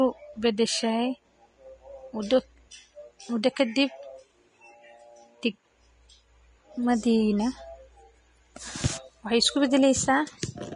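From start to end, the speech carries plainly audible damage, likely from Vorbis compression. Nothing is heard above 10.6 kHz. The treble sounds grainy and hissy, as fine detail becomes noise of similar energy. Attacks blur. This fits roughly 32 kbps.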